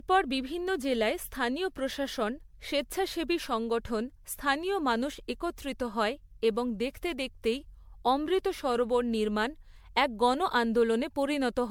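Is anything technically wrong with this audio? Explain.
Yes, there's generation loss running through the whole speech clip. It sounds swirly, hollow and smeared, with soft, blurred attacks, and likely comes from repeated MP3 encoding, something like seven passes at around 96 kbit/s, each adding fresh quantisation noise and spectral holes.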